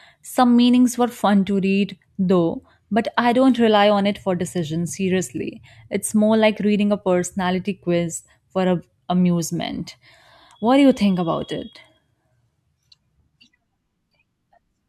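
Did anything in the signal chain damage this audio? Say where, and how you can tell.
Yes, there's a block of digital silence at about 8.17 s in this speech, and it sits at the driver or buffer stage. The dropout lasts only about 0.67 ms, which fits a 32-sample block, so you won't hear a hole. You hear a tick or a dip, because the sound cuts out and back with no fade at either edge. That pattern points to the output buffer not being filled in time for that one block.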